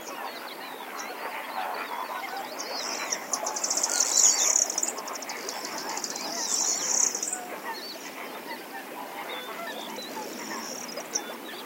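No technical faults can be heard in this recording of everyday sounds.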